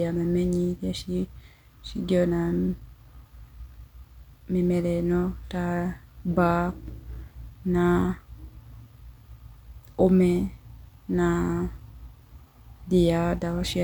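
Nothing here calls for comment: the speech runs along without any technical fault turning up at any point.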